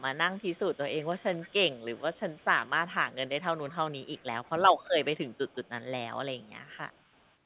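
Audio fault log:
0.00–4.93 s, 5.25–5.83 s and 6.35–7.35 s, echo leak: a faint copy of the speech follows each phrase 343 ms later, about 25 dB below it at first, then about 30 and about 35 dB down. The likely cause is a far-end loudspeaker whose echo canceller let some of its microphone pickup return. On a spectrogram, weaker harmonic ghosts trail each syllable by a third of a second, all stopping at 4 kHz like a narrowband phone codec. The waveform shows small repeated envelopes in the pauses.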